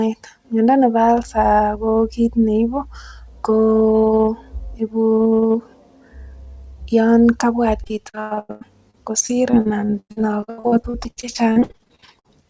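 From 7.84 to 12.34 s, repeated packet loss: about forty holes, patched by extending prior sound, make the speech choppy and robotic, not one brief dropout.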